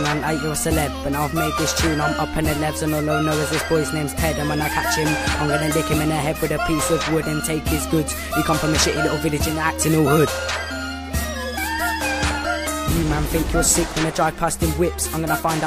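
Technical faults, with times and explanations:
No technical faults can be heard anywhere in the audio. There is nothing here that needs a time or an explanation.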